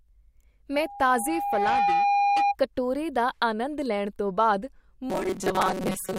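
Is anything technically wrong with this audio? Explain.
Yes, two faults are audible.

From 0.74 to 2.56 s there is loudspeaker feedback squeal. A microphone is picking up the loudspeaker it drives, and at 810 Hz the loop gain exceeds one, so that frequency keeps reinforcing itself. It swells over about a second into a steady, piercing tone roughly 5 dB above the speech. It dies away just before "ਕਟੋਰੇ ਦਾ".

From 5.10 s to the end, the speech has a robotic sound from repeated short buffers. New audio is likely arriving too seldom, so playback keeps reusing the last short buffer while much of the real audio, well over half, is skipped. The repetition imposes a fixed 188 Hz buzz, which fits a buffer of about 5.3 ms. The speech turns metallic, only loosely following its original rhythm.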